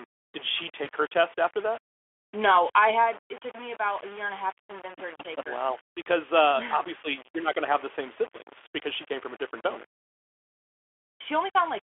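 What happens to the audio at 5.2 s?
At 5.18 to 5.22 s, between "half to convince her" and "take her", there is VoIP packet loss concealed by the speech codec. A 20 ms stretch of data went missing, and the Speex decoder filled it by extending the last pitch and spectral shape at falling gain. The voice briefly fades, and stays weak or distorted for tens of milliseconds after the packets return.

Running through this moment, as through the whole clip, is grainy distortion that tracks the voice, with noise only about 20 dB below the signal. The likely cause is low bit depth without dither, probably rounding to 6 bits.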